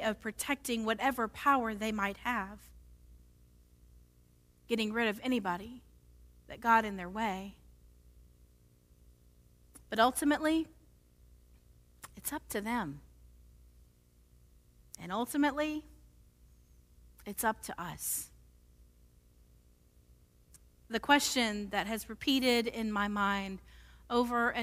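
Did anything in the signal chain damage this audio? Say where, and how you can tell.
Yes. A steady buzz with a gritty hash above it sits well below the speech for the whole clip, pitched at 60 Hz, a display's field rate. This is video or display buzz: a screen or video cable coupling into the analogue wiring.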